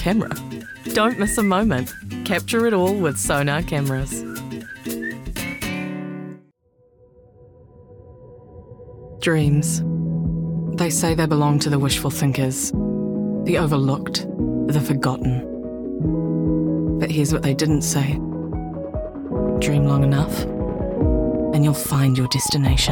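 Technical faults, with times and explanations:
19.49–22.91 s: train of clicks. About 40 sharp, similar-shaped pulses at roughly 10.9 per second, unevenly spaced, ticking over the sound and through any gaps, peaking about 5 dB above the signal. The pattern points to electrical interference from nearby equipment or a faulty connection or power supply.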